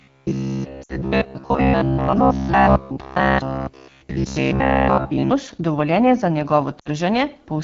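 Throughout, the speech carries the rough, raspy coloring of the AMR wideband (HD Voice) codec at one of its lowest rates, which fits the 8.85 kbit/s mode. On a spectrogram, detail thins above 6.4 kHz into a shaped noise band reaching 7 kHz, and harmonics look smeared.

From 0.02 s to 5.31 s, a rigid metallic buzz at about 66.7 Hz rides over the speech, with most of the audio replaced by repeats. This is robotic sound from repeated short buffers, likely caused by 15 ms chunks being replayed while real input arrived late. The waveform shows identical cycles every 15 ms, and the spectrogram shows evenly spaced horizontal lines.

From 0.83 s to 0.98 s, lost AMR speech frames leave a short dip that drops to near silence, a gap of about 60 ms, which fits three 20 ms frames. The decoder stretched the last good settings at falling gain. The waveform envelope sags, and the spectrogram shows frozen, fading formants.

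The same lost AMR speech frames fault returns from 6.79 s to 6.89 s, again about 60 ms of concealed audio. The sound smears and dips, then returns thin and rough for a moment. The spectrogram shows a brief column of stalled, dimming harmonics where the energy drops.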